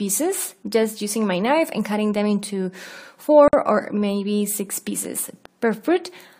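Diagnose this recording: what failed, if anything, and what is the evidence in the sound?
A gap at a join of encoded pieces opens at 3.48 s and lasts about 52 ms, to 3.53 s. Continuous sound drops abruptly to silence and then resumes exactly where it stopped, with both edges smeared by the codec. The fault is at the codec stage: separately encoded segments were concatenated without trimming, so the encoder's start-up delay and the padding of the last frame were both left in at the seam.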